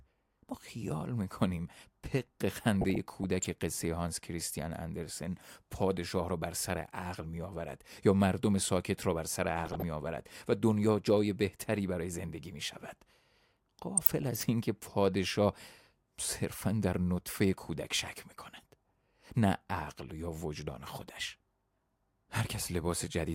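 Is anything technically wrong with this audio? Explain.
Yes. DAB burbling occurs at 2.75 to 3.46 s, 9.65 to 9.82 s and 13.97 to 14.45 s. Bit errors at a few tenths of a percent slip past error correction into the MP2 data, corrupting samples and scale factors. Wrong samples give short blips of noise in single sub-bands over the speech, and wrong scale factors make sub-bands jump in level for up to a frame.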